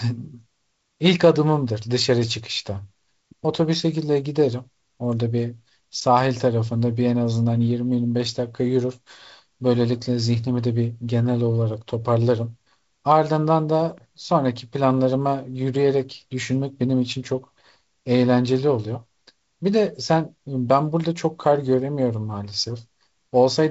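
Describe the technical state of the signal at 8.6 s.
At 8.6 s the speech is intact, with no fault present, only the wideband telephone band limit near 7.7 kHz and the slight coding hiss of G.722, which fits its lower 48 kbit/s mode.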